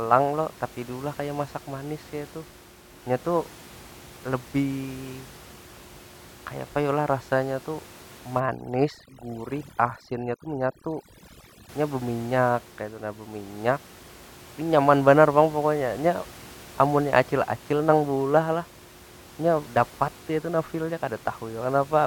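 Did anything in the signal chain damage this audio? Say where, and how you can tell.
Yes. The damage sits in call processing: overdone noise removal from 8.40 to 11.69 s. In that stretch the room noise, which otherwise sits about 22 dB below the speech, collapses to near silence with little twinkling specks. The suppressor was set too hard, so it pushes individual frequency bands right down whenever they look like its noise estimate, taking the quieter parts of the speech along with them.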